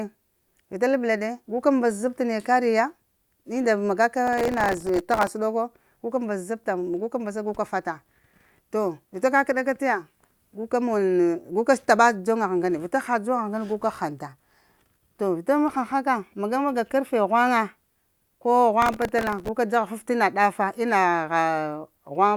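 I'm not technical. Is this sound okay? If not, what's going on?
No. Gritty crackling tears through the speech from 4.27 to 5.30 s and from 18.82 to 19.48 s. This is processor overload crackle: the computer fell behind and kept replaying scraps of old audio, each only a millisecond or two long.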